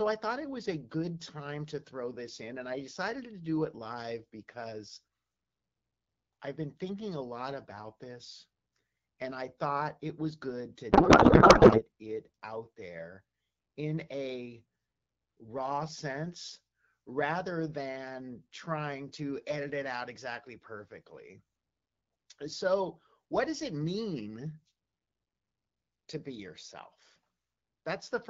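A codec payload misread hits this speech clip from 10.91 to 11.83 s, between "it was good to" and "it out there in". For just under a second, the speech gives way to garbled noise and warble that barely tracks it. That points to AMR frames packed in octet-aligned form being unpacked as bandwidth-efficient, so every field lands in the wrong place until the packing matches again. Around it, the clear AMR wideband sound fits a 12.65 kbit/s rate.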